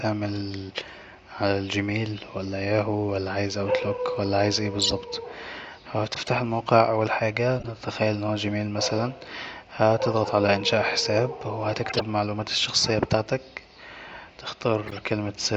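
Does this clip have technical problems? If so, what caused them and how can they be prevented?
Yes. Corrupt frame decoded: damaged compressed frames reached the decoder and were played anyway, so misread gains and codes put energy at the wrong frequencies. This is heard as short chirps and noise bursts at 4.82–4.93, 6.13–6.29, 7.60–7.65, 11.89–12.01 and 14.85–14.98 s, loudest at 4.8 and 11.9 s. Checksums with error concealment, so that damaged frames are dropped and masked instead of decoded, would prevent it.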